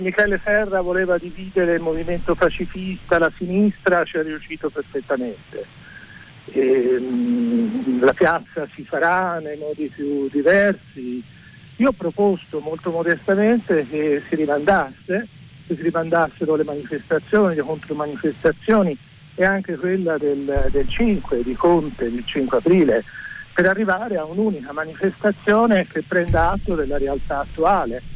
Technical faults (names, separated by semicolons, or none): none